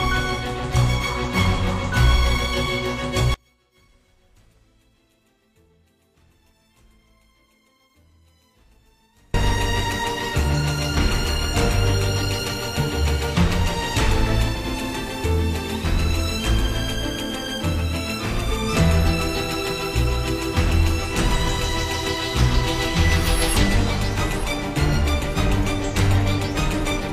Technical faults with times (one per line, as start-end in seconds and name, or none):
3.34-9.34 one channel inverted
14.49-18.72 digital radio blending to analogue